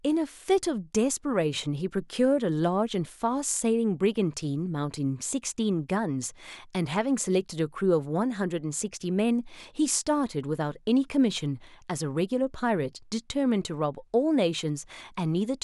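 No technical faults can be heard anywhere in this speech recording. There is nothing to mark at any point along its timeline.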